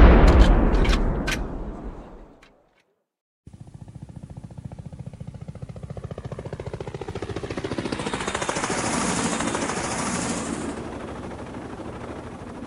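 From 7.10 s to the end, a doubled audio track appears: a second full-band copy of the sound, about as loud as the original and roughly a second behind it, likely from a second, slower capture path or an edit holding two misaligned copies. Unlike an echo or reverb, the copy has no decay or room colour and cuts in abruptly.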